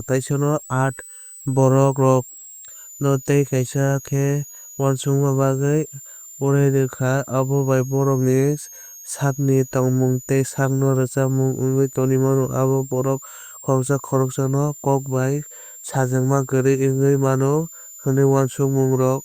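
Throughout the speech runs a switching supply whistle: a thin high tone wandering between about 6.5 and 8 kHz, centred near 7 kHz, roughly 20 dB below the speech. A switch-mode supply is cycling in an audible burst mode or beating against another supply.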